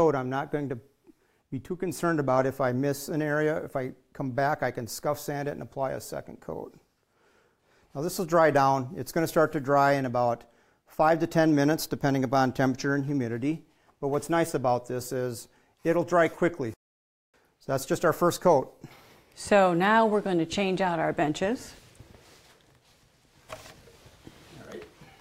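No technical faults are audible anywhere in this recording.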